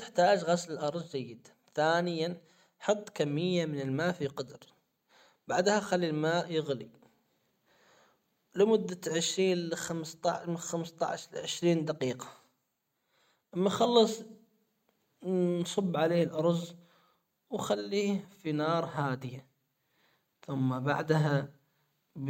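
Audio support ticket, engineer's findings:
Nothing to flag on this speech clip: listened through the whole thing, heard no problem anywhere in the playback chain, and no component needs a closer look.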